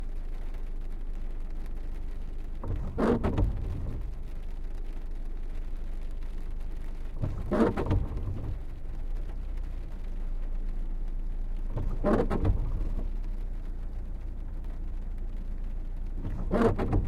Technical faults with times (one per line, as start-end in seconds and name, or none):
12.62-13.52 drift correction step